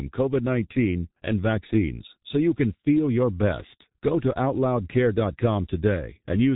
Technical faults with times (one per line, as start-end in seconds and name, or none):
0.00-6.55 G.723.1 codec